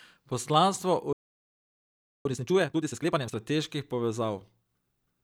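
At 1.13 s the speech cuts to silence for about 1.12 s, resuming at 2.25 s. That is a playback stall, likely the player running short of data.

From 2.25 s to 3.37 s comes time-compressed catch-up, with the speech running at twice normal speed as small pieces are cut and cross-faded away. Pitch stays natural, which separates it from a resampling speed-up.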